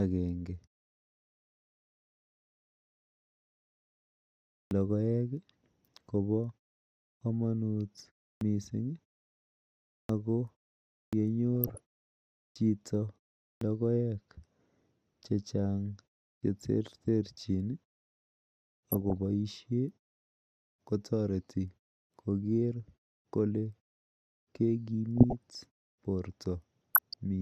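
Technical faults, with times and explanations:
4.67, 7.17, 8.37, 10.05, 11.09, 12.52, 13.57 and 16.39 s: clipped start after a pause. Each time speech resumes after silence, the first 37 to 44 ms are missing, so the word begins abruptly without its opening sound. The output path seems to go idle during the gap and wake too late. The gaps range from 0.34 to 4.08 s. This removes speech.
11.55 to 11.78, 18.92 to 19.17, 25.17 to 25.35 and 26.94 to 27.15 s: DAB burbling. Short bursts of burbling sit over the speech for roughly a fifth to a quarter second each. Weak reception lets a small fraction of bits, under one percent, slip past error correction into the MP2 data. Corrupted samples put short noise blips in single frequency bands, and corrupted scale factors make bands jump in level for up to a frame. Nothing falls silent here, which sets it apart from a dropout or a clipped start.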